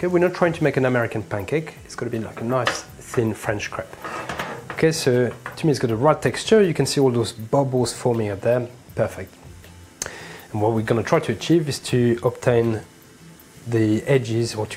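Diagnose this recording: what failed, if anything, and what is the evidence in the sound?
Nothing failed; no fault is audible anywhere.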